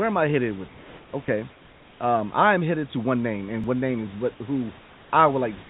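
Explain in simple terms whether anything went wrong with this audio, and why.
In three pauses, at 0.68 to 1.13 s, 1.52 to 2.0 s and 4.79 to 5.12 s, comfort noise replaced the real background. A steady, flat, slightly quieter hiss stands in, likely because the sender stopped transmitting during silence.

At 3.64 s there is a repeated buffer. A tiny slice, about 1.3 ms, played three times in a row, giving a brief click. That fits a 64-sample buffer arriving late.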